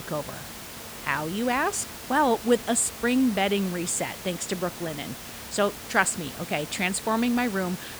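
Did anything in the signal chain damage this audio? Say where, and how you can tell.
No, nothing in the signal chain has damaged this speech recording. The room noise heard behind the talker sits about 14 dB below the speech and belongs to the acoustic space around the microphone, not to any stage of the system.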